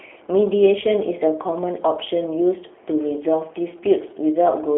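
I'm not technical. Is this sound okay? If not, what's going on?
No. The whole clip, from start to finish, has passed through the G.729 codec, a phone-call compression system that rebuilds speech from a simplified model of the voice rather than storing the actual sound. The damage is plainly audible: the voice sounds slightly rough and synthetic, like an internet phone call. Everything above about 3.6 kHz is missing, and the narrow telephone band keeps only roughly 300 Hz to 3.4 kHz, so the speech sounds muffled.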